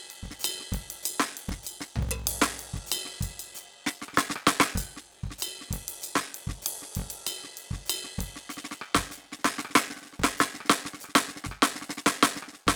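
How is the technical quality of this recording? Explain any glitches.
The quality is poor: a block size mismatch (padded) affects the music for its whole length. One stage hands over blocks shorter than the next stage reads, a pattern that fits a 1024-sample read block, and each block's missing tail is filled with silence. Those tiny gaps repeat at about 46.9 Hz, giving a steady low buzz under the music, and the stretching makes everything play at 0.861 times normal speed while the pitch stays about where it should be.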